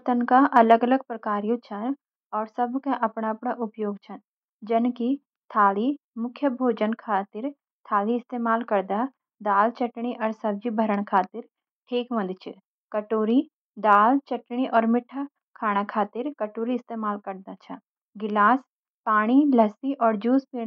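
Listening through this speech recording, nothing stood out as a technical problem at any point.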